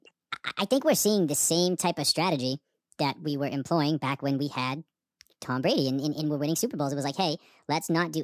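From start to finish the speech plays at the wrong sample rate. It runs 1.45 times faster than it was captured, with no resampling, so everything sounds hurried and pitched up about 6.45 semitones, a bit chipmunk-like. That ratio fits 22 kHz material played at 32 kHz.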